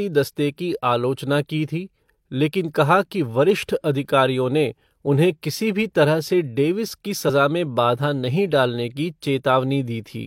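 At 7.25 to 7.31 s, damaged data in the compressed stream makes the decoder misread corrupted frames and lose sync, producing a brief glitch in the speech.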